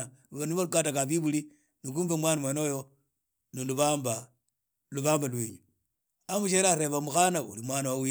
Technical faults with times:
2.45-6.46 sample clock jitter

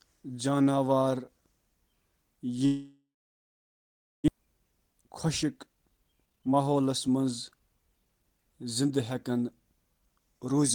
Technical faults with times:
2.65-4.30 long network dropout
4.38-8.82 jitter buffer speed-up

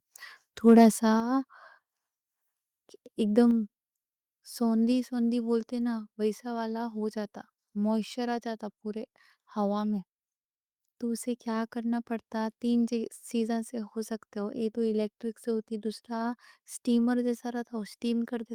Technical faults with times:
1.20 microphone volume stepped down

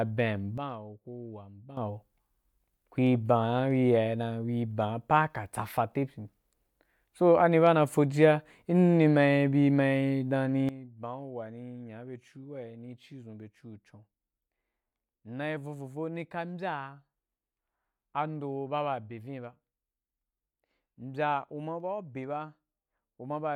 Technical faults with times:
0.58-1.77 sudden gain jump
10.69-23.55 sudden gain jump

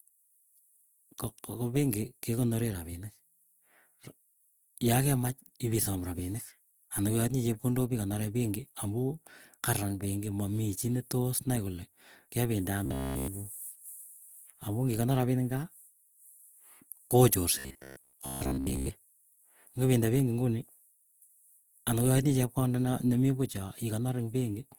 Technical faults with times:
0.00-24.79 Opus compression
12.86-13.28 robotic sound from repeated short buffers
17.59-18.91 robotic sound from repeated short buffers

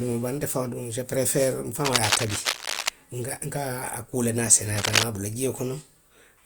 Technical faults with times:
1.84-2.89 cable scratch noise
4.76-5.03 cable scratch noise

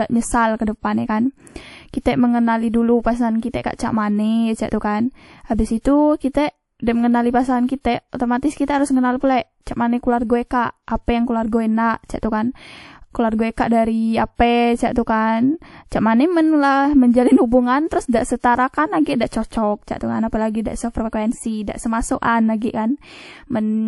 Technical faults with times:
0.00-23.87 transcoding between lossy codecs

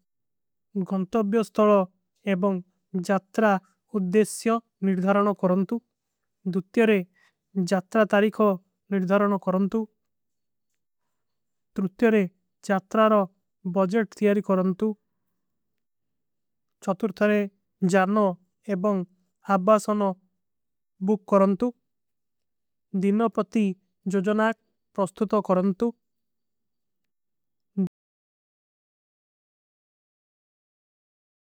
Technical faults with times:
27.87-31.45 audio dropout to silence

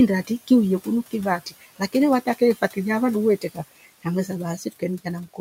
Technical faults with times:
1.46-1.94 speech cut by the noise suppressor

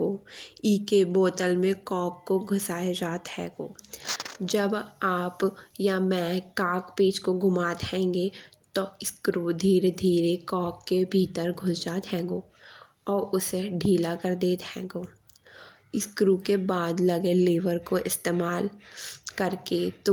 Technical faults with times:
none

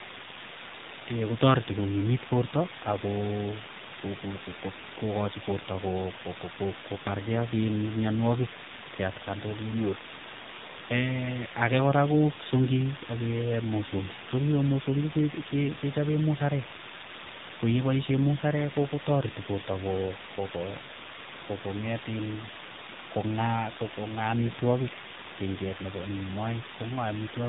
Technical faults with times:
0.00-27.49 low bit depth with dither
0.00-27.49 tandem speech coding

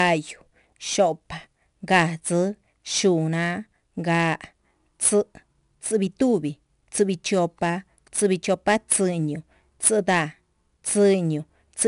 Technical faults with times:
0.00-11.88 4-bit ADPCM compression

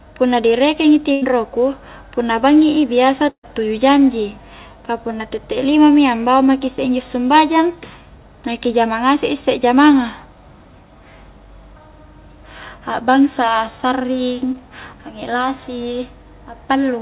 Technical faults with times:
1.12-1.23 burst of packet loss
3.29-3.45 burst of packet loss
14.53-14.56 short concealed packet loss

